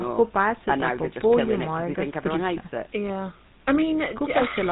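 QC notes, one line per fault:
Throughout, GSM full-rate codec: the speech has a plainly audible buzzy, gravelly roughness and stops at 4 kHz. The coder models the vocal tract and drives it with regularly spaced pulses, keeping only every third excitation sample, which fits a 13 kbps full-rate stream. That pulse-train grit sets it apart from plain low-pass filtering, which would only dull the sound.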